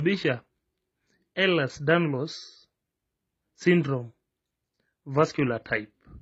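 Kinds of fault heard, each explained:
Transcoding between lossy codecs: The speech carries two layers of coding damage heard together, likely from a low-bitrate MP3 pass followed by re-encoding with HE-AAC. There is MP3-style smearing and swirl, plus the synthetic, hissy top end of HE-AAC's spectral band replication, which fits rates around 32 kbit/s then 20 kbit/s. A single low-bitrate encode shows one codec's signature. Here the mixed signatures stay layered throughout, each stage compounding the last.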